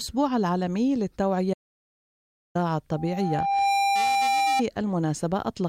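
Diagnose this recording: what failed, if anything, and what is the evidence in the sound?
Audio dropout to silence from 1.54 to 2.55 s: about 1.01 s of silence with no room tone, likely an input link or mute failure at the analogue wiring stage.

Loudspeaker feedback squeal from 2.91 to 4.63 s: a 794 Hz tone swells within under a second to roughly 5 dB above the signal, as the microphone-to-speaker loop exceeds unity gain.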